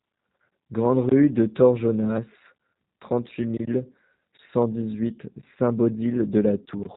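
Speech, carrying plainly audible G.729 codec damage from start to finish. Nothing above 4 kHz survives, and each 10 ms frame is rebuilt from a vocal tract filter, pitch predictor and a few pulses, giving a rough, synthetic edge consistent with an 8 kbit/s G.729A stream.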